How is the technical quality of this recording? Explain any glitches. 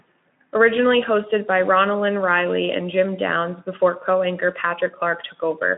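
Nothing stood out as a glitch when listening to this speech recording, which has the narrow, telephone-like band and light coding texture of a Speex line.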